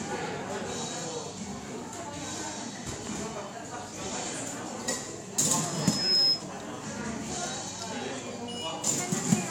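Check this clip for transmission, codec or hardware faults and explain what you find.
Loudspeaker feedback squeal, from 5.59 to 6.46 s: a microphone picks up its own loudspeaker, and at 5.2 kHz the loop gain tops one, so that tone feeds on itself, swelling over roughly half a second into a piercing whistle around 10 dB above the surrounding sound.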